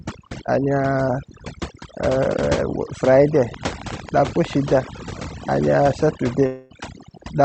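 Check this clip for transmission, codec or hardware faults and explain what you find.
Three problems stand out in this speech clip: heavy-handed noise reduction across the whole thing, a burst of clicking in the middle, and a network dropout near the end. The top end also stops around 8 kHz, which fits a wideband call codec such as Opus.

Overdone noise removal runs from start to finish. The noise suppressor was set too aggressively, so it kept pushing individual frequency bands down whenever they came close to its idea of the noise floor. The quieter parts of the speech got swallowed along with the hiss. Pauses go nearly dead except for little twinkly specks.

A train of clicks sits between about 3.54 and 4.54 s. It's roughly ten clicks at a steady 11 per second, all much the same shape, and they poke out a little above the speech itself. A pulse repeating that evenly most likely comes from electrical interference from nearby gear or a faulty connection or power supply. 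You hear it as regular ticking laid over the sound.

A long network dropout runs from 6.46 to 6.73 s. About 240 ms of audio never arrived, most likely lost packets that the jitter buffer couldn't recover. The receiver covered the whole gap by stretching out the last bit of sound, so there's no true silence. Instead you get a short buzzy smear, and then the speech picks up again with that chunk simply gone.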